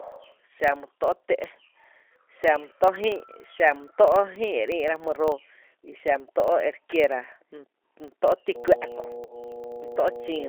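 From the first second, the speech carries the sound of a G.729 codec. The band runs from about 300 Hz to 3.4 kHz, so the voice is thin and has no air. The damage is plainly audible. The voice sounds rough and slightly synthetic, as if rebuilt rather than recorded. The codec models each short frame with a vocal tract filter, a pitch predictor and a few pulses. This fits the 8 kbit/s G.729A variant.

A second fault also runs through the whole clip: a filter restarted on every block. The filter drops its memory at each block boundary and starts again from silence. Each restart leaves a small transient. The transients repeat at 25 Hz, which gives a low, rough buzz under the speech. The buzz grows louder and softer with the speech level.

At 8.55 s, just after "mý tó’ ti", mains hum comes in and lasts to the end of the clip. It is a steady 60 Hz tone with some low harmonics. It is strong, nearly as loud as the speech itself. 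Power-line energy has leaked into the signal, most likely through a ground loop or a nearby transformer. The hum does not follow the speech. It stays constant underneath it.

From 9.25 s to 9.37 s there is VoIP packet loss concealed by the speech codec. The gap fits about four lost 10 ms frames, about 40 ms of audio. With nothing new to decode, the decoder keeps repeating its last pitch and filter and lowers the gain frame by frame. The sound stretches into a fading buzzy tone. Each frame builds on the one before, so the speech stays weak and smeared for a short while after packets return, to about 9.37 s.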